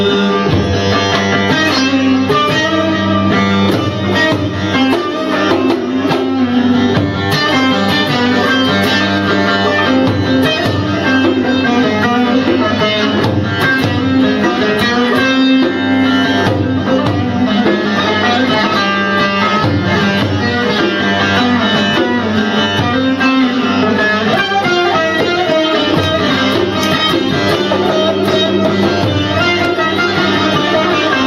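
Gain pumping runs through the whole clip: the gain swings by roughly 10 dB, ducking under each loud sound and squashing levels together. Likely an input gain set far too high, with a fast limiter clamping down. Unlike a noise gate, the gaps grow louder, not silent.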